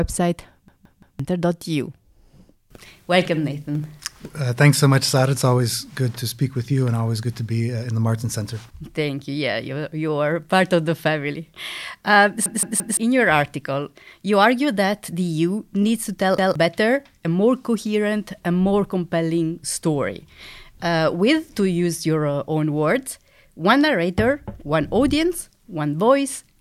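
At 0.68 s, 12.46 s and 16.38 s the speech stutters with a repeated buffer. Playback ran dry, so the device replayed its last block of about 0.17 s, which fits an 8192-sample buffer. The first two events repeat that block three extra times, ending at 1.20 s and at 12.97 s, just before "your article you argue". Each loses roughly half a second of speech. The third, right after "needs to tell", repeats once. On a waveform or spectrogram, identical 0.17 s tiles sit side by side, separated by sharp vertical seams.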